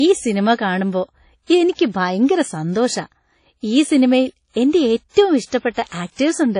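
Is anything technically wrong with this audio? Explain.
Yes. Throughout, the speech carries plainly audible WMA compression, likely from a low-bitrate encode around 32 kbps. It sounds ringing and washy, with breathing hiss and nothing above 10.1 kHz.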